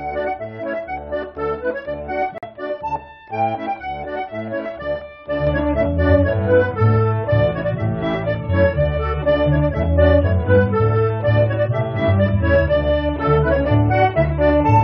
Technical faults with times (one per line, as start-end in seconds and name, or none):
2.38-2.46 corrupt frame muted
5.47-14.84 sudden gain jump